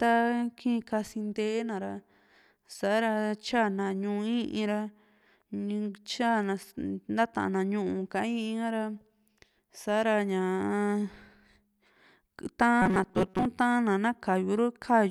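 Between 12.82 and 13.46 s, new audio likely arrived too seldom, so a short stretch was replayed in place of about half the real signal. The result is robotic sound from repeated short buffers: a rigid, metallic buzz near 188 Hz, which fits a repeat of about 5.3 ms.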